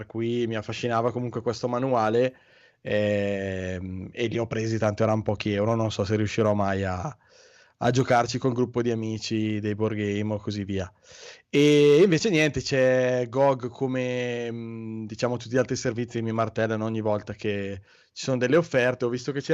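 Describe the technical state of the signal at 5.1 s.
At 5.1 s the speech signal is intact, with no audible technical fault at that moment.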